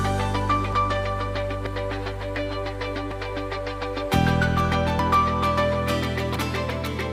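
A forward jump in the sound at 0.73, 1.66, 3.12, 4.99 and 6.36 s, likely dropped buffers (overruns), each skipping about 40 ms, the last nearer a tenth of a second.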